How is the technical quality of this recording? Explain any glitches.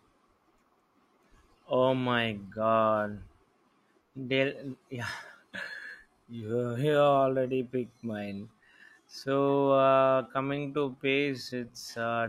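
The recording has one glitch. From 5.59 s to the end, the speech abruptly slows to about 0.73 times its pace with the pitch unchanged, sounding dragged. This is likely a time-stretched section: software lengthened the audio by repeating short pieces to preserve pitch.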